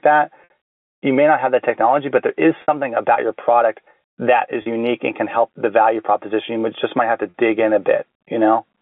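Packet loss with pitch repetition hits at 0.44, 2.62, 4.62 and 7.3 s, the last just before "in a". The receiver fills each gap (60, 60, 40 and 40 ms) by looping the final pitch period, heard as a brief, buzzy hold.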